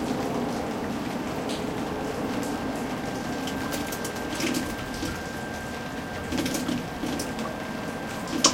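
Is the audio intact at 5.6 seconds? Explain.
Yes, at 5.6 s the audio is intact, with no dropout, click, distortion or other fault to be heard at that point.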